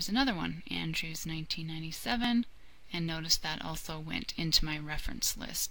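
No technical faults can be heard anywhere in the clip. Nothing in the audio breaks, drops out or changes character at any point.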